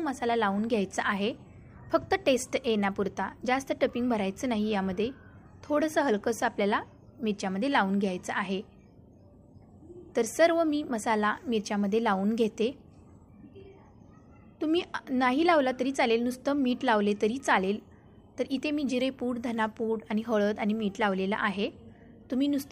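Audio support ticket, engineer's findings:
Two sharp single clicks at 5.81 s and 10.30 s, each a thin vertical line across the spectrum. Likely dropped samples: a fraction of a millisecond lost, so the waveform jumps.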